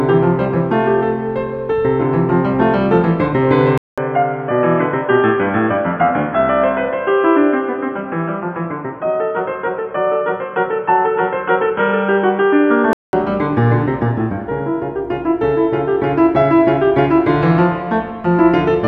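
Music, which turns dull and boxy from 3.78 to 13.13 s after a 200 ms gap, likely an input switched to a poorer device. The spectrogram shows nothing above 3.4 kHz, a faint new noise floor and unchanged waveform level.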